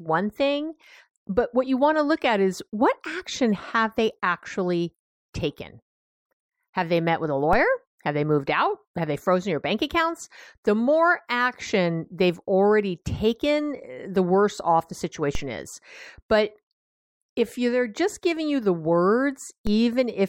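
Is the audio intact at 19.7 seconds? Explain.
No. At 19.67 s a low thump cuts into the speech, a single dull knock underneath it while the speech carries on unchanged. This is a DC step: the waveform's zero line suddenly jumps by an offset of about -18 dBFS, as happens when a converter recalibrates or an input carrying an offset is switched in. The step then drains away slowly, as a 5 Hz high-pass would pull it back, so only the abrupt jump is audible.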